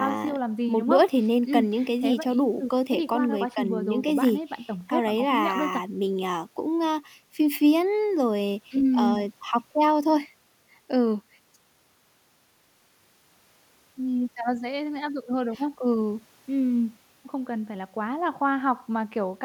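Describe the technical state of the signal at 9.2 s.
At 9.2 s the speech signal is intact, with no technical fault audible at that moment.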